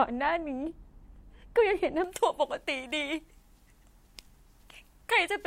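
From 2.04 s onward, pre-emphasis is left on: a treble lift, consistent with the J.17 curve, is applied, but the matching de-emphasis never follows. At 10 kHz the highs sit about 11 dB above 1 kHz, so the speech turns thin, bright and sharply sibilant.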